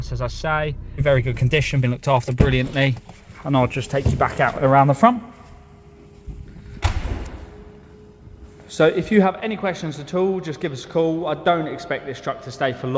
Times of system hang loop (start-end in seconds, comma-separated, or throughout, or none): none